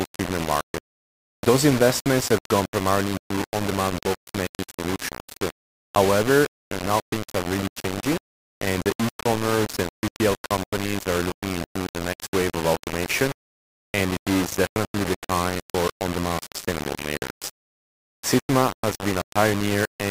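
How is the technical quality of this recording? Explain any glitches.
The technical quality is poor: one fault runs through the whole recording.

Low bit depth without dither, from start to finish. The grit points to a signal likely reduced to about 4 bits and rounded to the nearest step with no dither added. With so few levels, the rounding error tracks the waveform instead of forming a steady hiss, and it sits roughly 10 dB below the signal itself. The result is a coarse, grainy distortion that changes with the sound, while the quietest passages break up into sputtering or fall to silence.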